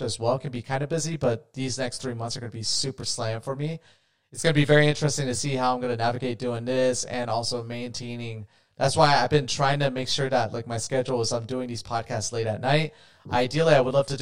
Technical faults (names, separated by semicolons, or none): channel delay (comb filtering)